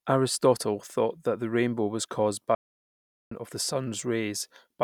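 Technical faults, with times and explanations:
2.55 to 3.32 s, playback stall: the speech cuts to silence right after "the rainbow was caused" and stays silent for 0.76 s. It then resumes with "of the". The player likely ran short of data, so output halted until it recovered.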